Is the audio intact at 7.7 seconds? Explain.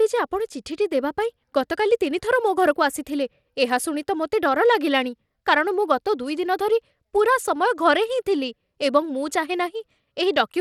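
No. At 7.7 seconds the speech carries the same damage it has from start to end: Bluetooth SBC compression, plainly audible. Nothing reaches above about 16.9 kHz. The treble that remains sounds grainy and unstable, with a gritty noise riding on it. The likely cause is SBC coding at a low bit pool, which fits roughly 96 kbps. Its few sub-bands get too few bits, so the top bands are coarsely quantised or dropped.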